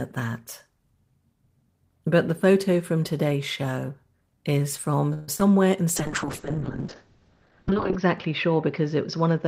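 A speech clip with two separate faults. From 5.13 to 5.42 s there is repeated packet loss with a robotic sound: the audio stutters through several holes in quick succession, the longest about 144 ms. Most of that stretch (about 61%) is patched by stretching the preceding sound, and about 30 ms is simply dropped. Unlike a single dropout, the repeated patching gives a choppy sound with pieces missing rather than one clean gap. From 5.97 s to the end, a call bitrate drop sets in. The encoder's budget appears to fall from something like 32 kbps to around 8 kbps, and the top of the spectrum is cut at 6 kHz where it previously reached 20 kHz. The speech turns muffled and watery, worst for roughly two seconds. This is a steady loss of detail and brightness rather than choppiness, which is what separates it from the earlier packet loss.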